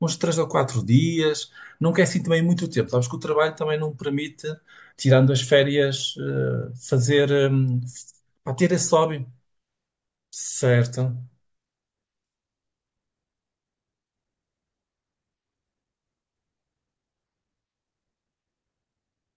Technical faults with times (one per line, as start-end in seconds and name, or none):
none